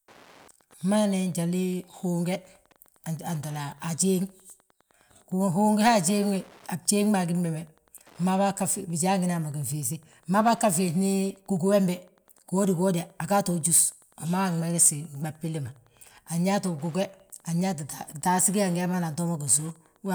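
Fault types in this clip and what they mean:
Wi-Fi interference: a nearby radio's beacon, rectified by the audio circuit, ticks steadily every 102.4 ms under the speech, quietly; its fixed rate distinguishes it from random crackle.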